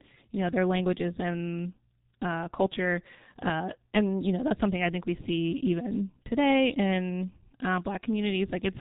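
G.723.1 codec damage runs through the whole clip, from start to finish, and it is heavy. Nothing reaches above about 3.8 kHz, so the speech sounds muffled and boxed-in. The codec models the voice in coarse 30 ms frames at a very low rate, consistent with its 6.3 kbit/s mode. That slow, blocky update leaves a hoarse, buzzy texture, and consonants smear together instead of landing crisply.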